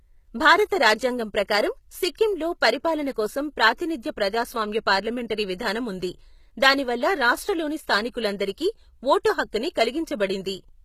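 From start to finish the speech carries plainly audible codec damage, likely from HE-AAC compression at a low rate that fits roughly 20 kbps. Only the lower spectrum is coded. The treble is rebuilt by copying lower bands upward under a coarse envelope, so its harmonics fail to line up with those below, and s sounds lose their natural texture. A spectrogram shows nothing above 14.9 kHz, with the upper band looking like smeared copies of the region beneath it.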